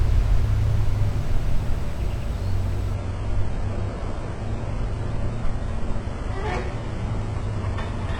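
An adaptive stream at a lower bitrate takes over at 2.95 s and lasts to the end of the clip at 8.19 s. The audio switches abruptly, with no gap, from a higher-bitrate version to a much thinner one. Nothing remains above 10.8 kHz, and codec artefacts increase. The character of the change fits the player stepping down from roughly 96 kbit/s AAC to a 12 kbit/s HE-AAC stream after the connection slowed.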